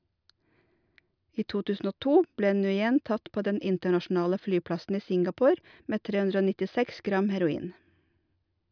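No technical faults are audible.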